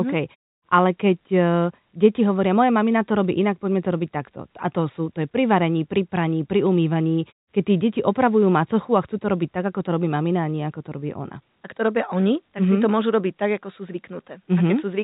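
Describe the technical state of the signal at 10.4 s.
At 10.4 s the audio is intact, with no fault present, just the narrow telephone-band sound of G.711 coding, where nothing above 4 kHz gets through.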